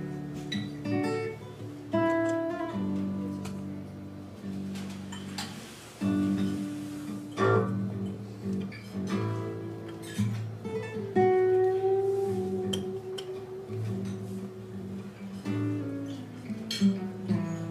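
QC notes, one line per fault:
No faults found anywhere in the audio.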